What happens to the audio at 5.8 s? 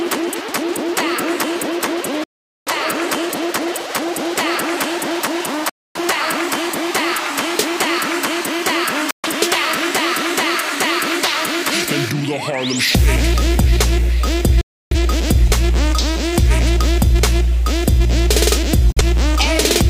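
Digital broadcast dropout, 5.69 to 5.99 s: the receiver muted when frames failed, so sound fades out within 3 ms and returns with that stretch lost.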